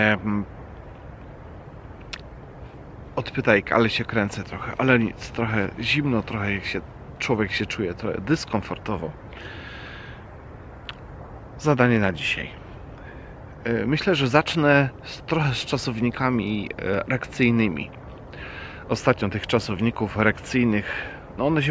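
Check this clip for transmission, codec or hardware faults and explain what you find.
Nothing faulty can be heard anywhere in this recording.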